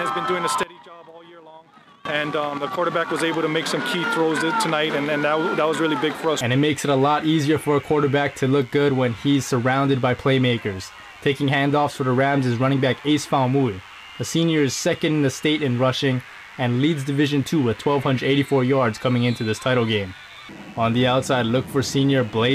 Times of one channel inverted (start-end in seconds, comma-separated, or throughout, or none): 0.63-2.05